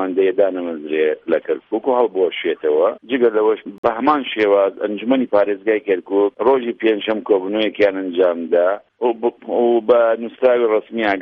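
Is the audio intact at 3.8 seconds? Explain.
No. From 3.78 to 3.84 s the sound cuts abruptly to silence for about 53 ms, a brief hole in the audio, and then carries on. This is most likely a Bluetooth stall: radio interference delayed the wireless packets, so the headphones' small playback buffer emptied before fresh audio arrived, and output simply stopped until the retransmitted data came through and playback resumed.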